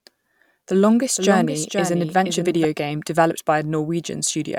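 Speech, with a doubled audio track from 1.17 to 2.65 s, starting just before "game developed". A second copy trails about half a second behind, roughly 5 dB quieter, starting and stopping abruptly. It likely comes from a second, slower capture path.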